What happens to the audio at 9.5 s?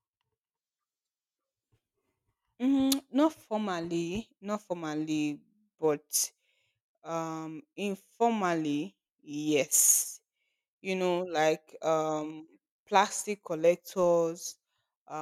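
At 9.5 s the speech is inside a block size mismatch (truncated) that runs from 8.31 to 10.99 s. One stage hands over longer blocks than the next stage takes in, so the tail of every block is discarded and each block boundary becomes a discontinuity. Those regular cuts produce a buzz at 43.1 Hz, which fits 1024-sample blocks. Pitch and playback speed stay at their normal values through the span.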